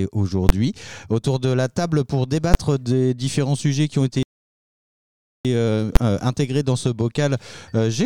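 At 0.49 s there is a single sharp bang. This is invalid numbers at full scale. A calculation went infinite or invalid, and the output was pinned at maximum level for one short block. That block lasts about 10.7 ms, which fits a 512-sample processing block. Because it is so short, the start and end pops merge into one loud crack. The same bang returns at 2.54 s.

From 4.23 s to 5.45 s the sound stops dead for about 1.2 s, then picks up again. This is a playback stall. The player stopped producing output mid-flow and stayed silent until it recovered. The likely cause is that it ran out of data or its thread was blocked. The gap is long and clearly audible.

At 5.96 s the full-scale bang happens a third time. It has the same short, hard crack and the same block length as the first two.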